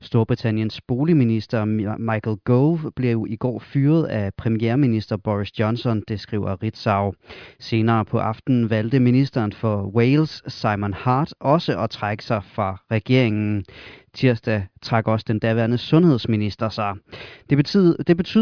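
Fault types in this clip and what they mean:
None: no audible technical faults anywhere in this speech recording.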